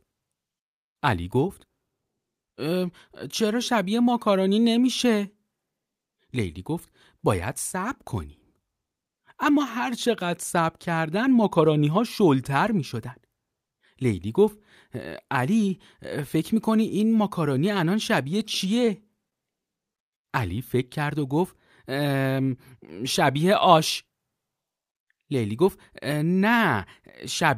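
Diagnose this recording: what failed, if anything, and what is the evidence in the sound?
Repeated stalls (stutter), 18.75 to 19.64 s, network stage: six brief holds, the longest 25 ms, where the jitter buffer ran dry and the receiver stretched the last sound, so the speech drags.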